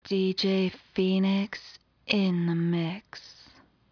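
Nothing in this recording of sounds points to a technical fault. There is no event to place in time.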